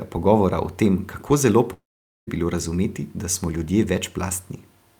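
Speech, with a long network dropout from 1.73 to 2.29 s. After "o tem kako zelo" the last sound smears into a fading buzz, then silence. It resumes at "bilo razumeti da smo" with about 0.54 s missing, likely from lost audio packets.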